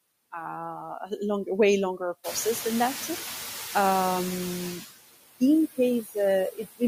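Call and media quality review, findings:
Noise suppressor artifacts, throughout. Background pulled down by about 15 dB between phrases, swelling back under speech. Component: noise suppressor. Mechanism: per-frame gain cuts on every band judged to be steady noise.

Noise suppressor catching up, 2.23 to 4.49 s, right after "uh longer way longer". Room noise jumps about 18 dB near 2 s and settles about 13 dB under the speech; the jump itself is real room sound. At first it is cut only about 6 dB, then sinks over 2.26 s. Mechanism: noise estimate lags the sudden rise and adapts slowly.

Speech cut by the noise suppressor, 6.03 to 6.16 s. Roughly a tenth of a second of speech dips, deepest about 11 dB, so a soft sound or word ending is swallowed. Component: noise suppressor. Mechanism: low-level speech energy classified as noise and attenuated with the background.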